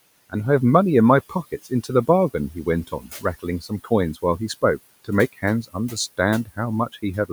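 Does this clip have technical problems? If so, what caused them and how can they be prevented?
Yes. Speech is cut by the noise suppressor from 2.87 to 3.24 s and again from 3.61 to 3.91 s. In each stretch the suppressor mistakes quiet parts of the speech for background and pulls them down with it, by about 13 dB at the deepest in the first and about 11 dB in the second. Roughly a tenth of a second or more of sound turns faint or swallowed each time. The room noise sits about 22 dB below the speech. Easing the suppressor's strength or slowing its gain changes keeps soft speech from being treated as noise.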